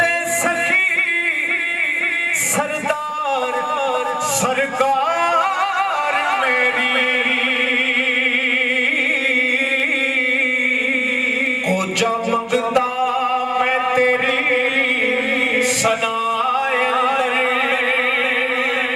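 Two sharp, isolated clicks land at 9.8 s and 11.47 s, each a thin instant tick. Both are likely dropped samples: a tiny fraction of a millisecond vanishes from the stream, so the waveform jumps abruptly to a later value without losing any audible sound.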